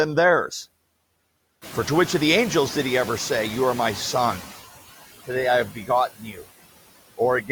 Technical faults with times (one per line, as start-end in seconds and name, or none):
0.00-7.51 noise suppressor artifacts
1.61-4.49 noise suppressor catching up
5.70-5.90 speech cut by the noise suppressor
6.16-6.44 speech cut by the noise suppressor